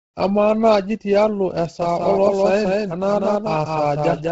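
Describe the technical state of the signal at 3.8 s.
At 3.8 s the speech carries a doubled audio track, running from 1.82 s to the end: a second full-band copy trails by about a fifth of a second at roughly equal loudness. Unlike an echo or reverb, it has no decay and no room colour, and it cut in abruptly, likely from a second, slower capture path or misaligned copies in an edit.

The whole clip, this moment included, also sounds like heavy Bluetooth LC3 compression. Nothing is present above 7.8 kHz, and the upper band has the breathy, grainy texture of noise filling zeroed spectrum, likely from a low bitrate around 16 kbps with 10 ms frames. A plain low-pass filter would leave a clean top edge rather than this synthetic hiss.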